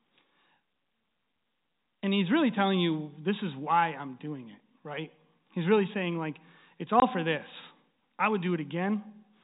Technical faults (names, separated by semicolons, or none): packet loss filled with silence